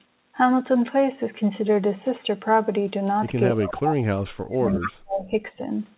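Speech suppressed in double talk runs from 3.53 to 5.42 s in this speech clip, which comes through a call path band-limited to nothing above 4 kHz, consistent with narrowband G.711 telephony. Over about two seconds, the talker's level is pulled down in pieces, dropping by as much as about 40 dB. The likely cause is the far end speaking at the same moment: the echo canceller could not tell the local talker apart from loudspeaker echo and attenuated everything it heard. Echo leak appears twice, as a brief scrap at 3.61 to 3.66 s about 15 dB below the speech, and a longer stretch at 4.7 to 4.89 s about 10 dB below. Both are delayed copies trailing the original by 262 ms, most likely sound from a loudspeaker reaching the microphone on one side of the call and not fully cancelled before being sent back.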